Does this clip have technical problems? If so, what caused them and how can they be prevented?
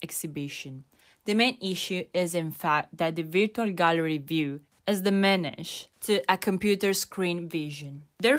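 No, there are no technical faults to report here.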